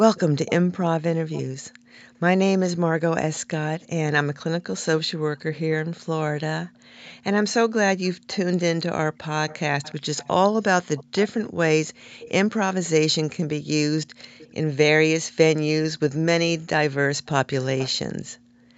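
From 0.15 to 1.43 s a faint delayed copy of the speech trails the talker by about 355 ms. It sits roughly 15 dB below the direct speech. This is echo leak. The likely cause is a far-end loudspeaker whose echo canceller let part of its microphone pickup through and sent it back.

At 1.8 to 1.9 s the background is gated by the echo canceller. The room sound drops by up to about 40 dB for roughly a tenth of a second, then returns. The canceller clamped the microphone while the loudspeaker played.

The echo returns four more times, at about 357 to 366 ms delay. From 3.33 to 3.87 s it is very faint, about 30 dB down. From 9.49 to 12.89 s it is the longest stretch, about 20 dB down. At 14.38 to 14.52 s there is a brief scrap, about 25 dB down. From 17.26 to 17.9 s it is again about 20 dB down. The delay creeps up slightly across the clip.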